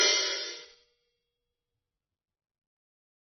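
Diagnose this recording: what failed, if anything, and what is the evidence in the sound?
Codec stage: the music is dull and watery throughout, with swirly, chirping highs and smeared attacks. A spectrogram shows a hard ceiling at 6 kHz and blotchy bands flickering on and off below it. Heavy MP3 compression is the likely cause, fitting a very low bitrate around 24 kbps.

Processing before storage: from 1.07 s to the end the music abruptly runs 1.91 times faster while the pitch stays put, sounding choppy and rushed. On the waveform, events crowd closer together, with small splice discontinuities where short pieces were dropped. This is likely a time-stretched section.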